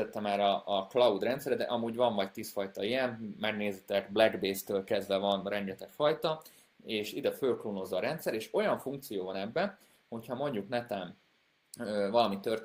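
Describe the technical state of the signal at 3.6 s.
The audio is intact at 3.6 s, with no audible fault at that point.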